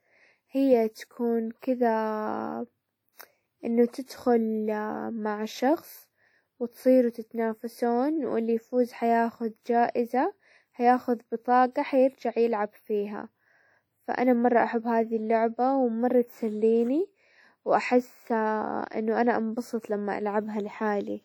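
Low-bitrate audio saved at a high bitrate runs through the whole speech clip. The sound keeps the coarse artefacts of a heavy first encoding, likely a WMA pass near 48 kbit/s later re-saved as 256 kbit/s MP3, which cannot restore detail already discarded.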